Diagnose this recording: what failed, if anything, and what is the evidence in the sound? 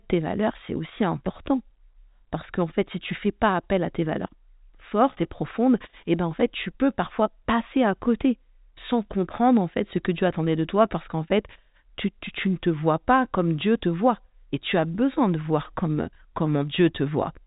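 Nothing has failed: the speech carries the expected narrowband character of G.711 telephone coding, with no content above 3.8 kHz, and no stage in the chain shows a defect.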